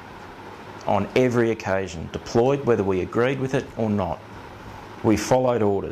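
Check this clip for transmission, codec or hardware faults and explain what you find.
No transmission, codec or hardware faults turn up in this clip.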